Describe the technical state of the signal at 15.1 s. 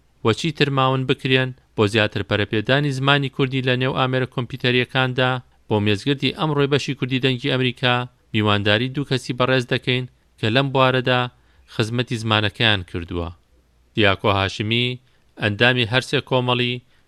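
At 15.1 s the signal is intact, with no audible dropout, distortion, glitch or other technical fault at that moment.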